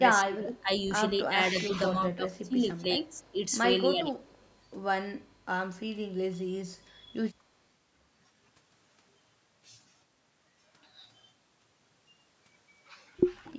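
A speech recording where the talker dips by up to about 20 dB at 0.0–0.69 s and 1.28–3.36 s, and by about 15 dB at 3.91–4.32 s and 6.84–7.14 s. This is speech suppressed in double talk, likely an echo canceller ducking everything while both ends spoke. Unlike echo, nothing is added; the voice itself thins and drops. An echo leak adds a faint copy about 239 ms late, roughly 25 to 40 dB below the voice, at 0.81–0.91 s, 3.1–3.36 s, 4.35–4.54 s and 13.46–13.5 s. It comes as a trailing repeat rather than a loss of level.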